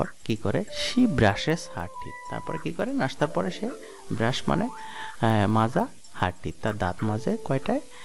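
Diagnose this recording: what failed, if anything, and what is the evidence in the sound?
The resampler was restarted on every block in the sample-format conversion stage. Faint ticks repeat at 10 Hz throughout, every 100 ms, only while sound is present; a spectrogram shows thin vertical lines at that spacing. Each block was upsampled in isolation, which points to a 24 kHz to 48 kHz conversion, so every block edge carries a small error.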